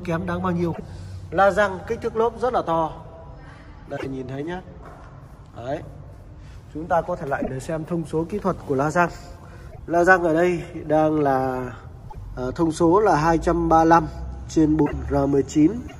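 A likely broken MP3 bit reservoir: frames seem to have been lost from the stream, so the frames that follow look back for borrowed data and decode someone else's bytes instead. The audio jumps ahead and the first few frames after each gap come out garbled, as a brief chirp, noise burst or hole of roughly three 26.1 ms frames. This happens at 0.72–0.80, 3.96–4.06, 7.41–7.49, 9.71–9.79, 12.08–12.17, 14.85–14.93 and 15.87–15.96 s.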